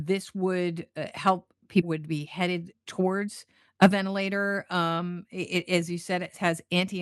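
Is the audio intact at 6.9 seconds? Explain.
Yes, the audio is intact at 6.9 seconds, with nothing there beyond the ordinary coding of the call path it passed through.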